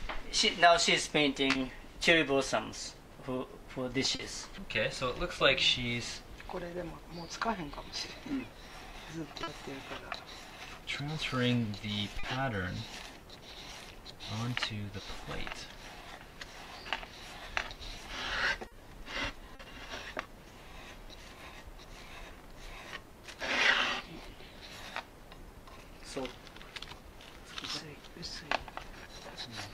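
Short concealed packet loss occurs six times, at 1.51, 4.15, 9.43, 12.19, 18.67 and 19.55 s. Each time, 40 ms of audio failed to arrive at the decoder in time, and the receiver filled the gap by extending the preceding sound, following its pitch where it was periodic or as shaped noise where it was not, before crossfading back into the real signal. Each event lasts about 70 ms and is heard as a brief smear or wobble, and a short sound may drop out.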